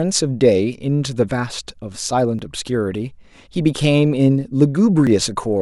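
A speech clip with two tiny forward skips at 2.39 s and 5.07 s, each losing a few milliseconds, likely a dropped buffer (overrun).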